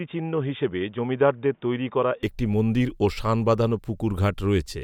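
From the start to about 2.23 s the speech sounds dull and boxy, with nothing above 3.6 kHz, a bit quieter and with faint extra background noise. Then it opens up with no gap. That's likely the input switched to a poorer device, maybe a headset's call profile.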